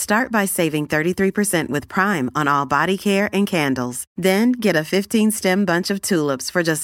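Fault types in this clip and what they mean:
No faults detected: the speech shows no audible technical defects.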